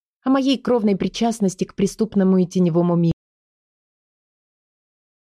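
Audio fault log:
3.12 s to the end: audio dropout to silence. The sound is going along normally and then just stops dead mid-flow. From there on it's silence, with no room tone, hiss or tail, and it never comes back before the clip finishes. That silent floor points to the input itself vanishing, most likely a device or link dropping out or a stray mute, while the recorder kept writing empty samples. Whatever happened after that point wasn't captured.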